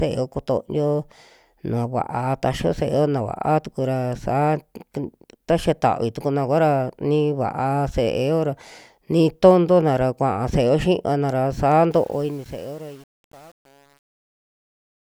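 From 11.91 s to 15.09 s, the speech fade-out shows truncation distortion on a fade. The gain stage discards low-order bits without dither, so from 12.07 s the shrinking waveform turns into coarse steps, which fits 8-bit resolution. It sounds gritty.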